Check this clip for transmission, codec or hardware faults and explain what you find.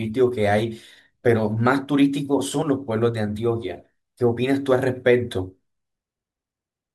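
One codec fault is present in the speech: compressed frames skipped, at 2.62 s. About a single frame of encoded audio never reaches the output, either because it is missing from the stream or because the decoder rejected it as corrupt, so playback jumps forward by roughly 20 ms, which fits a 24 ms frame length. The jump leaves a brief glitch at the join.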